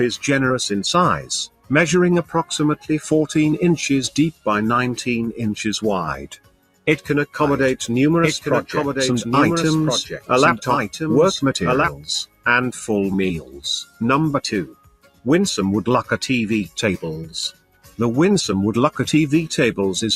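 The sound pumps and thins throughout, with held tones and decays dipping and recovering over a swing of roughly 10 dB, because a speech-tuned noise suppressor was left running on material it mistakes for noise, so sustained parts and tails are pushed down while attacks pass. Sharper dropouts, where the noise suppressor turned the sound down harder, hit at 1.47–1.71 s, 6.21–6.87 s, 12.26–12.46 s, 13.41–13.62 s, 13.85–14.01 s, 14.66–15.26 s and 17.52–17.99 s, sinking by up to about 18 dB before recovering.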